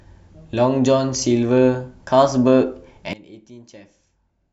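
From 3.13 s to the end, one channel has likely been inverted, so whatever the two stereo channels share cancels when they are summed to mono. The centred speech falls by about 21 dB, leaving only a faint residue of the difference between channels.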